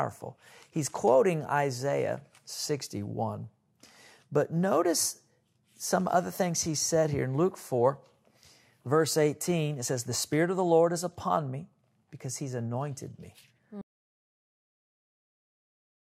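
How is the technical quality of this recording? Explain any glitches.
The one real problem is at the end. At 13.82 s the speech cuts out mid-flow and the rest of the recording, about 2.3 s up to the close, is dead silence. That's an audio dropout to silence: there's no fade and no room tone underneath. The likely cause is the input going away, through a loose connection, a dropped link or an accidental mute, while the recorder kept writing. Whatever came after that point is gone.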